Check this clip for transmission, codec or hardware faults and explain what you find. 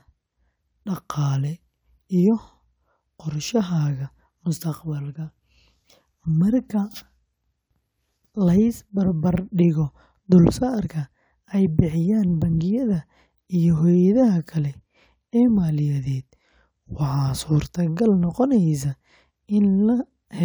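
Nothing here points to a transmission, codec or hardware problem; the speech comes through steady and intact the whole way.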